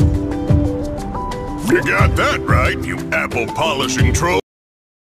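The audio has a cut-off end. At 4.40 s the sound stops in the middle of an event, with no decay or tail at all. Silence fills the remaining 0.66 s. This happens when the last buffers of audio are never written or played out. The recording or playback chain stopped before the final stretch reached the output, so the sound is truncated rather than ending naturally.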